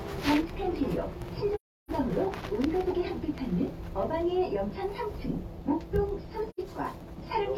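AAC frame loss with muting cuts two soft-edged silences into this everyday-sound recording, from 1.55 to 1.91 s and from 6.50 to 6.60 s. The decoder zeroed the missing spectra, and overlapping windows fade the sound out and back in. The gaps' lengths fit roughly eight and two lost frames.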